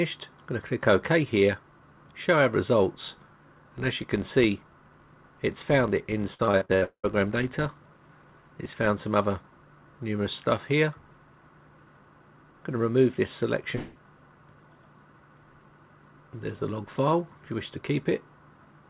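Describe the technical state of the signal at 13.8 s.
At 13.8 s you're inside a gap, from about 13.76 to 13.97 s, that's likely a long network dropout. Roughly 200 ms of audio never arrived, and the receiver papered over nearly all of it by stretching the last sound into a fading buzz or hiss, with no silent stretch, before the audio resumes minus the lost piece. Everything here, as on the whole G.711 call path, stops at 4 kHz.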